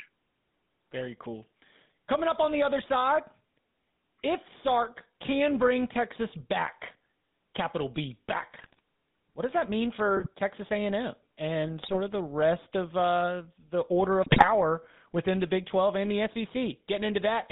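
Throughout, the GSM full-rate codec gives the speech a buzzy, gravelly roughness. Its narrow line band leaves a spectrogram bare below 150 Hz and above 3.7 kHz.

GSM bit errors then corrupt decoder frames at 8.54–8.79 s, 10.16–10.27 s, 11.82–11.99 s and 14.22–14.48 s. They cause squawks and gargling, seen as smeared spectra and sudden waveform spikes.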